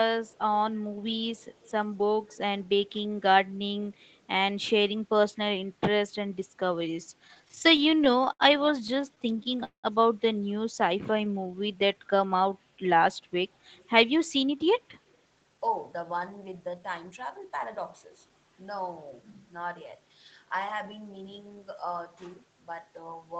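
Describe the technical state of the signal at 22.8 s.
At 22.8 s the speech is intact, with no fault, only the ordinary band limit near 8 kHz from the call path's Opus coding.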